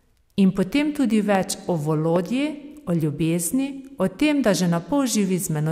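At 1.35 to 1.37 s, just after "potem tudi", a loud pop cuts across the speech, peaking roughly 10 dB above it. A second, stronger pop follows at 2.16 to 2.18 s, around 15 dB over the speech. Each is a single sharp transient, most likely an electrical pulse from a plug, switch or static discharge entering the signal path. Unlike a dropout click, the speech runs on unbroken beneath each pop, with no gap or missing audio.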